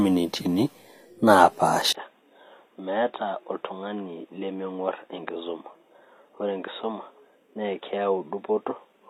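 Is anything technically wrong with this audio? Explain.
Yes, there are two faults. Throughout the clip, the speech was likely squeezed through HE-AAC compression at a low bitrate, around 24 kbps. The codec rebuilds the treble by copying lower bands upward, so sibilants come out gritty and lispy, and nothing survives above 15.4 kHz.

At 1.93 s, the recording likely switched its input to a poorer device. A 20 ms gap marks the switch. After it, the speech stays dull and boxy to the end: nothing remains above 3.8 kHz, the level drops by about 10 dB, and a new noise floor sits roughly 40 dB below the speech.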